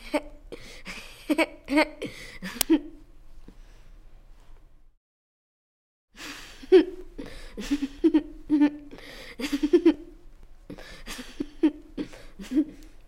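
At 2.61 s there is an uninitialised buffer: a block of about 5 ms went to the output before any audio was written into it, so stale memory contents played as samples. It comes through as a brief, loud crack.

From 4.08 s to 12.88 s come periodic USB or driver dropouts, spaced every 0.49 s, roughly twenty in all. Each time, something stalls the audio path and around 10 ms of signal is skipped, producing a regular tick or pop wherever sound is present.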